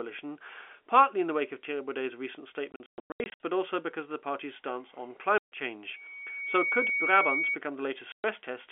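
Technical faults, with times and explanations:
2.72–3.40 s, 5.38–5.52 s and 8.12–8.24 s: packet loss filled with silence. Before "but also because of", about 460 ms drops out in holes scattered over 680 ms, the longest 120 ms. After "the party's stance on", a 140 ms gap follows, and a 120 ms gap near the end. The holes are hard-edged and come in multiples that fit 20 ms packets.
5.93–7.58 s: loudspeaker feedback squeal. A 2.2 kHz tone swells over roughly 0.7 s until it sits a few dB above the speech, then stops. The microphone is re-capturing its own loudspeaker, and at 2.2 kHz the loop gain exceeds unity, so that frequency keeps reinforcing itself.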